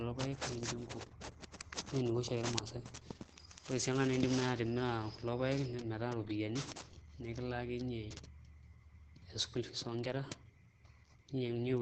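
A speech clip with Opus compression damage throughout: the sound is muffled and hoarse, likely from the codec's SILK speech mode at a very low bitrate, around 12 kbps. On a spectrogram, nothing appears above 9 kHz, with heavy codec damage below.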